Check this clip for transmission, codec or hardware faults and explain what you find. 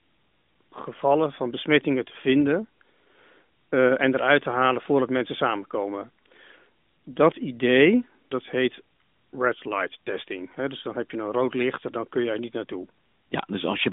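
Nothing wrong turns up here; it's just an ordinary narrowband mobile call, with the top end stopping a little under 4 kHz the way that kind of line does.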